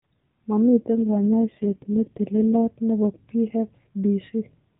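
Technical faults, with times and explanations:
0.95–2.66 s: AMR rate drop. Speech turns buzzier and more synthetic without a gap, which fits the codec stepping down from 12.2 to its 4.75 kbps mode.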